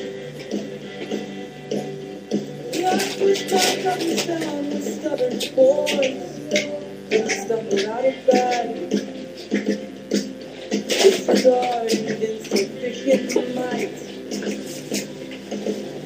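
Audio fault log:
Throughout: mains buzz, a steady, raspy buzz sitting well under the sound, around 30 dB down. Sharp switching spikes from a dimmer, rectifier or unshielded line arrive twice per 60 Hz cycle, spraying harmonics from 60 Hz up into several kHz.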